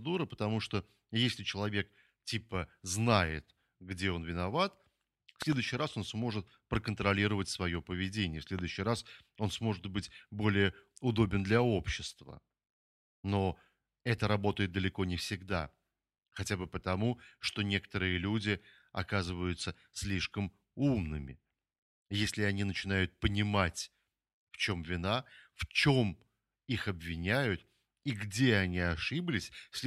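At 5.42 to 5.55 s, a double loud pop lands on the speech. It peaks around 15 dB above it. A single pop follows at 8.59 to 8.61 s, around 10 dB up. Each is likely a voltage spike from a plug or switch. Speech continues underneath.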